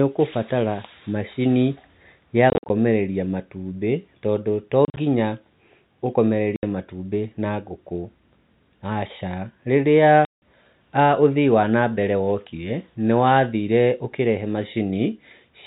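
Packet loss filled with silence chops the speech at 2.5–2.7, 4.85–4.97, 6.56–6.63 and 10.25–10.42 s. Dropped packets, which fits 10 ms framing, became hard-edged holes over the G.711 telephone band.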